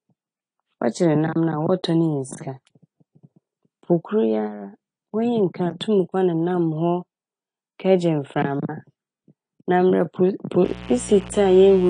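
From the start, the speech sounds dull and smeared, with a fizzy, warbling edge on sibilants and held vowels. On a spectrogram, energy stops abruptly at 10.2 kHz, and the bands below show patchy holes and blotchy fill that shift from frame to frame. This is AAC compression damage, likely from AAC-LC at a low bitrate, which fits something near 38 kbps. The encoder lowered its cut-off and coarsely quantised the spectrum.

From 10.65 s to the end at 11.9 s, a steady, raspy mains buzz sits under the speech, around 15 dB below it. Sharp switching spikes from a dimmer, rectifier or poorly shielded line leak in twice per cycle of a 60 Hz supply. A spectrogram shows evenly spaced horizontal lines at 60 Hz and its harmonics, reaching several kilohertz. In the waveform, a regular spiky pattern rides on the signal.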